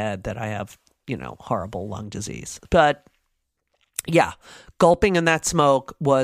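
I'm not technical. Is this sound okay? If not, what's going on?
Yes, this recording is fine. Nothing in it points to a technical problem.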